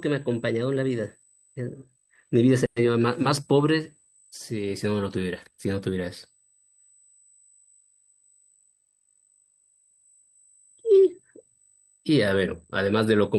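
Current drawn by the USB bus in 125-microsecond microframes is leaking into the audio through the power or ground path, producing USB whine for the whole clip. The whine sits at a fixed pitch built on 8 kHz, strongest at its 16 kHz multiple, around 30 dB below the speech. It is a thin, high, steady tone laid over everything, and it never drifts in pitch.

From 2.65 to 2.78 s there is a call audio freeze, most likely from packets held up in transit so that the jitter buffer ran dry. The receiver kept extending the last sound for about 110 ms as a fading buzz or hiss, never dropping to silence. When the packets arrived, the speech picked up exactly where it had stopped. Nothing is lost, but everything after that point runs about 110 ms later.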